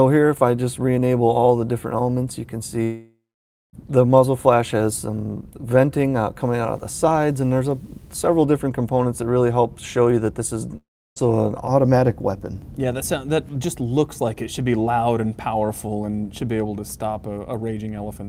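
From 2.83 to 3.75 s, a long network dropout is the likely cause. Audio stopped reaching the receiver for about 0.9 s, and its concealment carried the last sound forward as a fading buzzy hiss before giving way to roughly 0.55 s of near-silence. The sound then resumes further along, with that stretch simply gone. The same thing happens from 10.77 to 11.18 s, where about 0.4 s is lost and some 0.33 s of it is heard as quiet after the brief smeared tail.

Between 6.41 and 8.41 s, a screen or video cable is coupling into the audio path, producing video or display buzz. It sits as a 60 Hz buzz, matching the picture's field rate, with a layer of hash above it, around 35 dB below the wanted sound. It is faint but steady for those two seconds.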